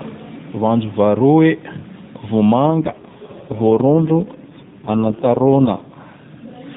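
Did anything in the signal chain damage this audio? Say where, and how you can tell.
Yes, an AMR rate drop at the codec stage. From 2.66 s to 5.97 s the speech turns buzzier and more synthetic, with no gap and the same 4 kHz-limited band, which fits the network pushing AMR-NB from 12.2 kbps down to 4.75 kbps to protect a weak link.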